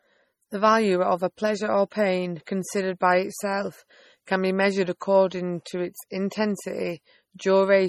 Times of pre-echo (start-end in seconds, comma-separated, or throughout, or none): 4.25